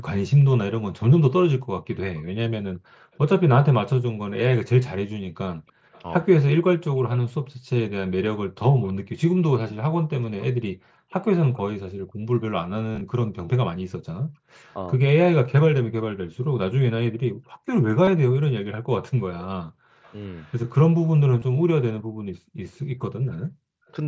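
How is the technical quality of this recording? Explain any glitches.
The recording has several call-processing glitches: two stretches of faint delayed echo, brief background dropouts, one clipped moment of speech, and a few short concealed dropouts from a Bluetooth headset. The mSBC headset link carries speech up to 8 kHz.

Echo leak, 2.16–11.58 s and 20.03–23.92 s: a faint copy of the speech trails 327 ms behind, roughly 25 dB down in the first stretch and 35 dB down in the second. The likely cause is a far-end loudspeaker whose echo canceller let residue through. On a spectrogram it shows as ghost harmonics offset in time.

Background gated by the echo canceller, 2.75–3.12 s, 11.97–12.25 s and 21.99–22.11 s: the canceller clamped the microphone while its loudspeaker played, so room noise drops by about 40 dB for 100 to 400 milliseconds, then returns. The waveform shows a flat near-silent notch, and the spectrogram shows a blank vertical band.

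Speech suppressed in double talk, 3.94–4.09 s: the speech dips by around 40 dB for about a tenth of a second. This is probably because both ends talked at once, and the canceller turned down everything it couldn't separate. It appears as a sudden hole in the speech envelope.

Concealed Bluetooth headset packet loss, 12.92–13.01 s, 18.05–18.07 s and 21.39–21.42 s: lost headset packets were filled by repeating recent waveform. The first event spreads 67.5 ms of loss over 90 ms and sounds buzzy. The later ones are 22.5 ms each. Spectrograms show repeated, comb-like harmonic slices.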